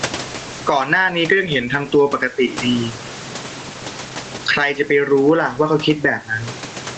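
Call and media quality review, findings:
Gain pumping throughout: gain swings about 15 dB, pulled down on each loud syllable. Likely mic gain way too hot, fast limiter clamping peaks.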